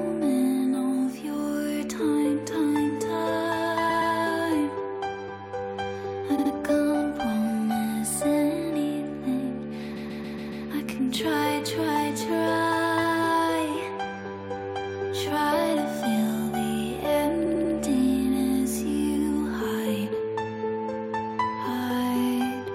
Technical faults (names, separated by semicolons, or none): repeated frames